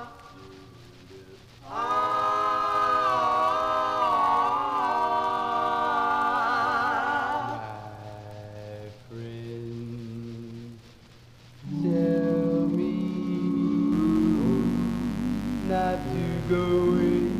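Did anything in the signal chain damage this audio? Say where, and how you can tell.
Yes. Mains buzz enters in the analogue wiring at 13.92 s and runs to the end: a steady, raspy 50 Hz buzz roughly 10 dB below the signal. Switching spikes at twice the mains rate spread harmonics up into the kilohertz range.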